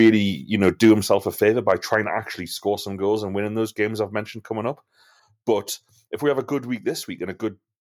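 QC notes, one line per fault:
0.0–0.1 s, microphone overload: a harsh, crackly edge right at the start, with peaks flattened about 3 dB past the converter's limit, likely from the input volume being set too hot.
0.64–1.14 s, microphone overload: the same gritty crackle on the loudest bits, peaks pushed about 4 dB over the converter's ceiling, likely because the input gain is too high.
1.02 s, microphone volume stepped down: everything, background included, suddenly drops by about 5 dB, likely the call software cutting the mic gain during that distorted stretch.
1.69–1.95 s, microphone overload: a milder, occasional crackle with tops clipped about 2 dB over the limit, likely because the gain is still a bit too high.
2.04 s, microphone volume stepped down: another abrupt drop of about 4 dB in overall level, likely the software trimming the input once more right after those clipped peaks.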